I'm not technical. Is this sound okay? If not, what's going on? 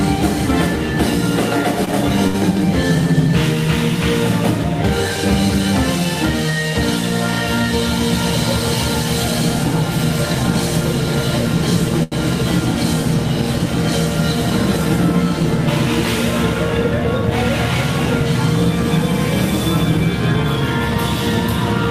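No. There are three short stalls from a late packet, at 1.85 to 1.89 s, 2.27 to 2.36 s, and 12.03 to 12.14 s. Each time, a piece of the audio arrived late, so the player held the last sound steady while it waited. That hold lasts about 16, 74 and 87 ms. Nothing is lost. The sound just hangs briefly, with a faint buzz or dip, then carries on a little later.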